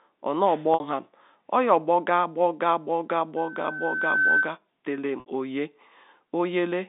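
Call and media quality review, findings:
Packet loss with pitch repetition at 0.74 s, 3.62 s and 5.20 s. Held, buzzy stretch of about 60 ms at 0.74 s and 5.20 s, about 20 ms at 3.62 s. Likely jitter buffer/PLC: the receiver repeats the last pitch period to bridge missing audio, and the gap lengths point to three, one and three lost 20 ms packets. The 20 ms gap is too short to fade fully to silence.

Loudspeaker feedback squeal from 3.37 s to 4.57 s. A steady 1.5 kHz tone swells over roughly a second and peaks at about 5 dB above the speech. Acoustic loop: the microphone picks up its own loudspeaker, and loop gain goes above unity at 1.5 kHz, so that frequency builds on itself. The 3.62 s dropout falls inside the squeal. The line band of about 200 Hz to 3.7 kHz fits G.711 mu-law.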